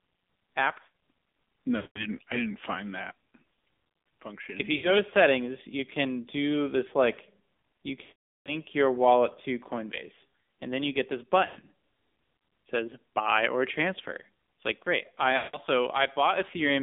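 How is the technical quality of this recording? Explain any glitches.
The recording has poor technical quality. It carries plainly audible mobile-codec damage throughout, plus five short breakups.

AMR narrowband mobile codec: For the whole clip the sound is confined to roughly 200 Hz to 3.6 kHz. It has a buzzy, synthetic edge, consistent with a low AMR-NB mode around 7.4 kbps. The codec rebuilds speech from a vocal-tract model driven by sparse pulses, so the coarseness comes from that model. A plain telephone band filter would sound muffled but would stay natural.

Lost AMR speech frames: These occur at 1.76–2.02 s (200 ms, ending just before "I didn't find that"), 4.76–4.96 s (80 ms, before "to settings you can"), 8.02–8.56 s (440 ms), 11.46–11.65 s (after "then you get this"), and 15.38–15.57 s (160 ms). The 11.46 s event is scattered: about 120 ms is lost across 160 ms, with a longest run near 100 ms. 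When frames fail, the decoder repeats the last pitch and vocal-tract settings at falling gain. As a result, the sound smears into a drawn-out warble and fades rather than cutting to hard silence or clicking like a simple dropout. The longer runs, especially at 8.02 s, decay to silence, and the speech returns weak for a moment.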